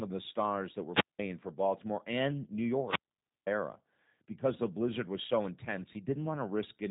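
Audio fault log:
throughout, G.729 codec: speech rebuilt from a vocal tract filter and sparse pulses sounds rough and synthetic, fitting an 8 kbit/s stream; the spectrogram is empty above 3.8 kHz.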